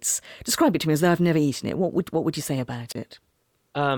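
At 2.88 s, right after "what would you say", the speech breaks up in a wireless microphone squelch dropout lasting until 2.95 s. The radio link from an analogue FM microphone weakens, hiss and static swell briefly, and the receiver's squelch then shuts the output for about 30 ms of near silence before the voice returns. That rising static ahead of the hole sets it apart from a digital packet loss, which cuts out abruptly with no noise building first.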